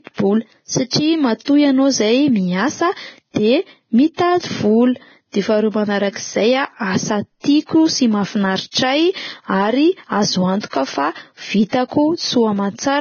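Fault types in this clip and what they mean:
Low-bitrate audio saved at a high bitrate: the speech has nothing above 6.5 kHz for the whole clip, and it carries the smeary, watery artefacts of heavy compression. It's likely a low-bitrate encode re-saved at a high bitrate, which can't restore what was stripped out.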